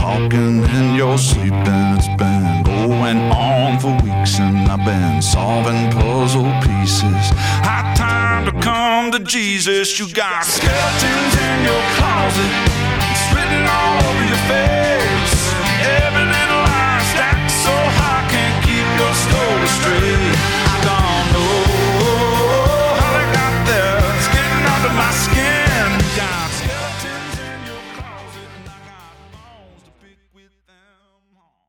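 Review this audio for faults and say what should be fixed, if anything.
Nothing here needs fixing, and the gentle fade-out that begins around 26 s glides down smoothly with no click or hard edge at the end.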